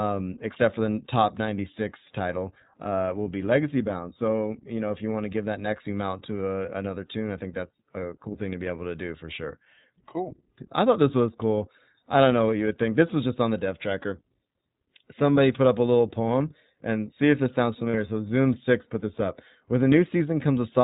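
From start to finish the speech sounds band-limited and slightly rough, with a plainly audible synthetic edge and nothing above 4 kHz. This is the iLBC codec at work: a narrowband VoIP coder that models each frame's excitation on its own, without borrowing from the frame before. The thin, buzzy texture fits the 15.2 kbps mode with 20 ms frames, and the missing top end is the hard narrowband ceiling.

At 6.66 to 6.69 s the sound briefly turns into a held, faintly buzzy vowel, and it happens again, roughly twice as long, at 17.90 to 17.96 s. These are lost iLBC frames. The first gap is about 20 ms, pointing to one lost frame. The second is about 40 ms, consistent with two. To conceal each gap, the decoder repeated the last pitch cycle blended with noise. Since iLBC frames stand alone, the speech snaps back cleanly right after each gap.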